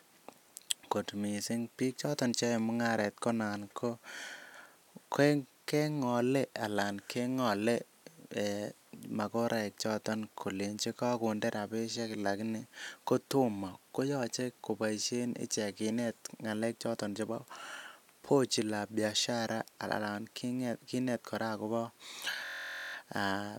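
From 22.45 to 22.94 s the speech gives way to a system hang loop: the host stalled while the hardware kept replaying one 23.22 ms slice, fitting a 1024-sample buffer, about 21 times. It sounds like a steady buzz near 43.1 Hz.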